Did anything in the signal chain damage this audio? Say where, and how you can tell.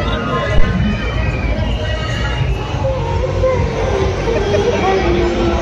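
Yes. A phantom power thump at 0.58 to 0.66 s, from the analogue input wiring: a deep thud that decays in 18 ms. Switching the supply on or off on a live input pushed a voltage step through the coupling capacitors.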